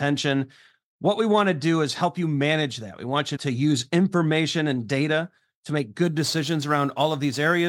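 From 6.03 s to the end, the speech picks up a gritty, inharmonic fizz riding on louder and brighter syllables. That's crude rate conversion: samples are simply dropped or repeated, fitting a 48 kHz to 44.1 kHz change, leaving error about 25 dB below the speech.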